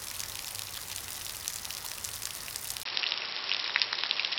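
At 2.83 s the sound breaks for about 20 ms and comes back narrower and duller through to the end, with nothing above 5.6 kHz. It also shifts in level by about 5 dB and carries a new background noise floor, faint at roughly 35 dB below the sound. The likely cause is an input switched to a poorer device. A plain filter or bandwidth drop would cut the top without the gap, the level jump or the different noise.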